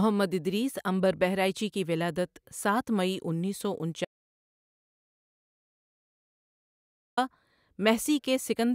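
The input feed was likely lost for a while, through a disconnected device, a failed link or an accidental mute, while the recorder kept writing silence. The result is an audio dropout to silence from 4.05 s to 7.17 s: the speech stops abruptly mid-flow and resumes just as suddenly, leaving a gap of about 3.1 s of complete silence with no room tone at all. Whatever was said in that stretch is missing.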